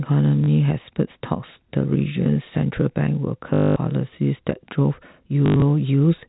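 Speech over a telephone-band G.711 link with packet loss and the last packet repeated at 0.44–0.48 s, 3.54–3.76 s and 5.46–5.62 s. Each gap is filled with a buzzy robotic stutter rather than silence, which fits 20 ms packets.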